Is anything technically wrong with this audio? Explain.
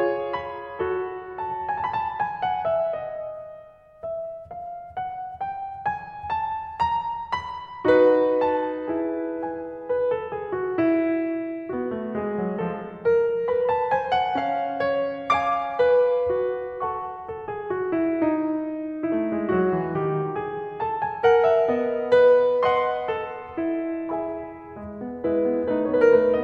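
No, nothing in this music sounds technically wrong to me, so there's really nothing to flag here.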